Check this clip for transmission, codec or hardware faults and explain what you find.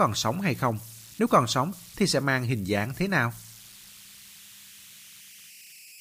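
There's one hardware fault, running the whole way through: converter idle tones. An undithered delta-sigma converter settles into repeating bit patterns on the quieter parts of the speech, giving a tone around 3 kHz in the pauses and a grainy hiss, about 23 dB below the signal.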